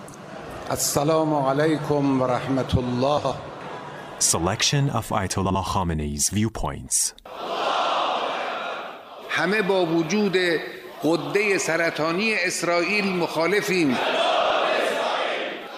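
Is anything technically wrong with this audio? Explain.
Yes. Frames out of order at 3.17–3.32 s, 5.45–5.55 s and 14.41–14.50 s: two adjacent blocks (72 ms, then 48 ms) play swapped, giving a garbled flutter. Spectrograms show abrupt discontinuities there, with no time lost.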